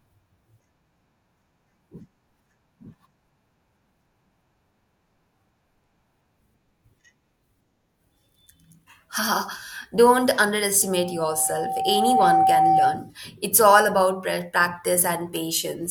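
From 10.82 to 13.11 s there's loudspeaker feedback squeal. The mic hears its own speaker, and a 769 Hz tone swells over about a second and a half to sit a few dB above the speech.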